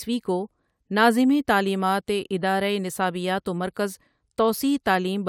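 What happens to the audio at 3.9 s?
At 3.9 s the speech plays through intact, with no dropout, click, distortion or other fault at that moment.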